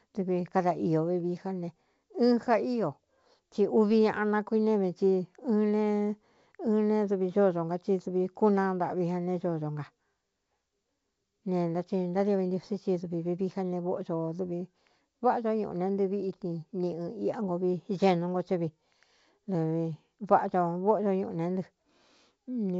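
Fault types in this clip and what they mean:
The speech comes through G.722 wideband telephone coding at 64 kbit/s, which keeps the band up to about 7 kHz, and no technical faults are present.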